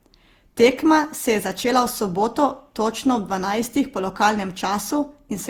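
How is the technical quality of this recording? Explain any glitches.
The recording is degraded by one fault that runs through the whole clip.

Generation loss, throughout: the speech sounds swirly, smeared and hollow, with softened consonant attacks, and the bandwidth still reaches about 20 kHz. That points to a lossy codec, likely Opus at around 64 kbit/s, applied repeatedly, roughly ten times over. Each decode and re-encode quantises the signal again on a shifted frame grid, so noise piles up. The result sounds worse than a single pass at that rate would.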